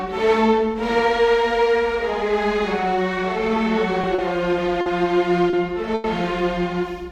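Short stalls from late packets hit this music clip at 4.01, 4.15, 4.81, 5.50 and 5.95 s. Each time the jitter buffer ran dry, the last sound was held for 20 to 90 ms with a slight buzz or dip, and playback resumed without losing anything.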